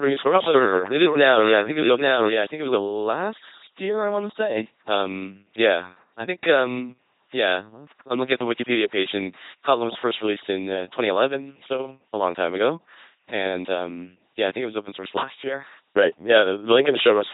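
From the very start to 2.82 s there's a doubled audio track, a full-band copy trailing roughly 0.7 s behind and about 5 dB quieter, likely a second, slower capture path. The whole clip is speech through the LPC-10 vocoder at 2.4 kbit/s: buzzy and robotic, with nothing above 3.9 kHz and frames forced fully voiced or unvoiced.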